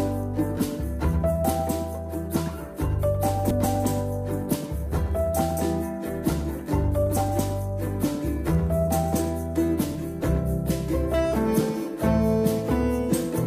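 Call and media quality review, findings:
Sample clock jitter, throughout. Fine hiss riding on the sound, rougher on loud and bright passages, gone in silence. Unstable converter clock, around 1 µs timing wander; slope-dependent error roughly 40 dB below signal.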